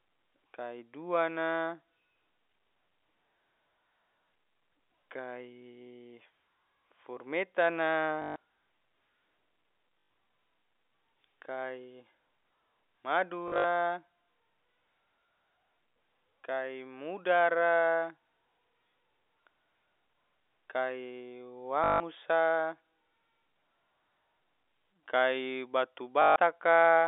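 Packet loss with last packet repeated hits at 8.22 to 8.36 s, 10.0 to 10.1 s, 13.48 to 13.64 s (scattered gaps, longest 60 ms), 21.84 to 22.0 s and 26.22 to 26.36 s. The receiver replays stale audio, producing robotic stutters buzzing near 50 Hz, which fits 20 ms packets, over narrow 300 Hz to 3.6 kHz G.711 telephone sound.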